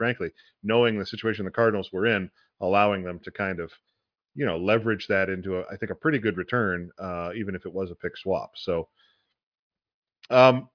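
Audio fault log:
The speech signal holds steady from beginning to end, with no technical disturbance to be heard anywhere in it.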